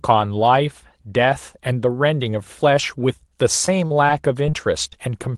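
Short concealed packet loss occurs six times late in the speech, as bits of the stream arrive too late to decode: at 3.66 s (about 10 ms missing), 3.87 s (40 ms), 4.07 s (10 ms), 4.47 s (10 ms), 4.51 s (20 ms) and 4.90 s (20 ms). Each time the receiver bridges the hole by extending the preceding sound and then blending back, leaving brief smears or wobbles. The 40 ms gap at 3.87 s is the longest.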